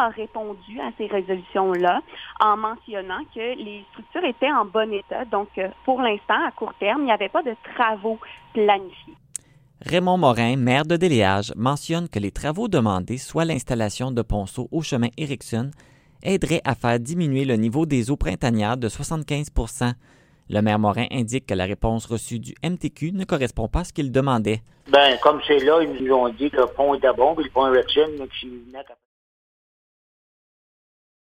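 There are no technical faults to describe in time order; the only change in level is a smooth fade-out from around 28 s that ends at 29.06 s.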